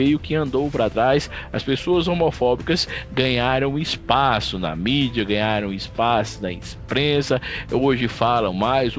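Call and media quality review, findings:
No faults found on this clip.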